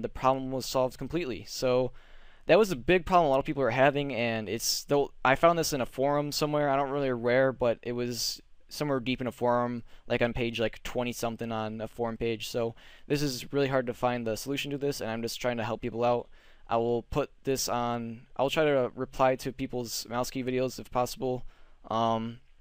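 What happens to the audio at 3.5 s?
Nothing goes wrong at 3.5 s; the audio runs through that moment intact, with no dropout, click or distortion.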